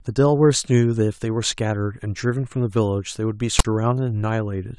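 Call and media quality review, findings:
File tags played as audio, 3.59–3.65 s: a hard-edged burst of loud, lopsided rasp followed by dead silence. Probable component is the decoder or demuxer reading a text metadata block and its zero padding as samples. The one-sided offset and the rasp-then-silence pattern mark it as read-in text, not a dropout or codec glitch.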